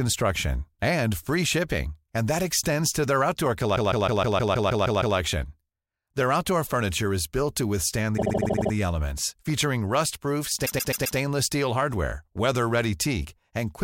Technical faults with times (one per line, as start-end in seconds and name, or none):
3.75-5.16 repeated frames
8.16-8.71 repeated frames
10.65-11.17 repeated frames